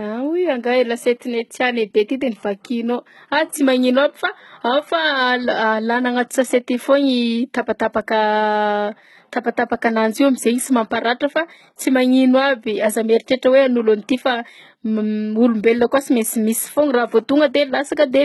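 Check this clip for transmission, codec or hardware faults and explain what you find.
One codec fault runs through the whole speech clip: likely HE-AAC compression. Treble sounds rebuilt by spectral band replication, copied up from lower bands, so s sounds turn gritty and lispy. Everything stops at 11.8 kHz. Plain low-bitrate AAC would instead sound dull and muffled. The heavy damage fits a bitrate near 16 kbps.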